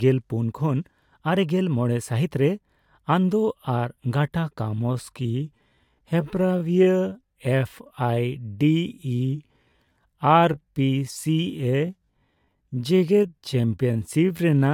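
From 4.59 s to the end, the speech abruptly slows to about 0.68 times its pace, dragging but unchanged in pitch, a time-stretched section likely from pitch-preserving stretching software.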